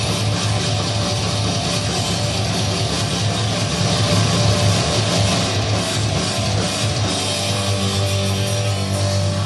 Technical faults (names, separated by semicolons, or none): doubled audio track